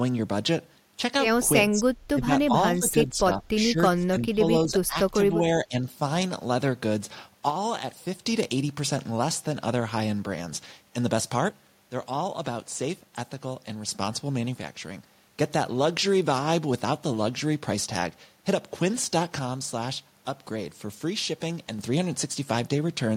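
Speech suppressed in double talk at 1.7–1.87, 2.12–2.3, 2.47–2.53, 2.73–4.42, 4.65–4.97, 5.13–5.46 and 5.65–5.87 s: the voice dips by roughly 10 to 25 dB in pieces, likely an echo canceller muting it while both sides talked.

One channel drops out at 7.5–8.25, 11.49–13.89, 14.55–15.33 and 19.39–21.79 s: the level falls abruptly by 6 dB, likely because one stereo channel vanished before the mono sum.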